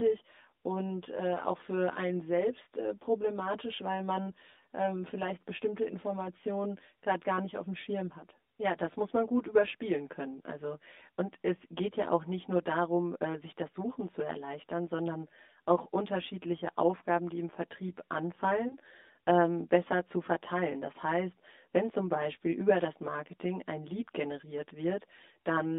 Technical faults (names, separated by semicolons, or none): channel delay (comb filtering); lost AMR speech frames